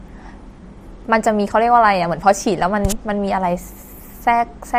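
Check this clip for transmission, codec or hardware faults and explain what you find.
There are two sharp clicks in this speech, at 2.63 s and 4.17 s. They're likely dropped samples: a handful of samples go missing, so the waveform jumps straight to a later value. That's a tiny fraction of a millisecond, far too short to lose any sound, so each one is just a single click.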